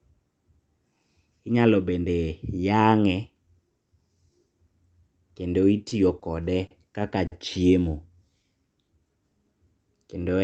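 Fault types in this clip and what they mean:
Short stall from a late packet: four times the jitter buffer ran dry, holding the last sound 20 to 50 ms; a spectrogram shows brief smeared, repeated frames.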